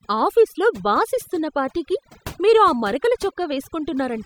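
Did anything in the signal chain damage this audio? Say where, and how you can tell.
Yes. The damage comes from overdone noise removal, applied at the processing stage and present for the whole clip. Between phrases the background drops, with twinkling specks where residual noise flickers through. The reducer was set too hard. It pulls individual frequency bands far down whenever they sit near its noise estimate. Quiet parts of the voice fall into that range, so they are cut along with the noise.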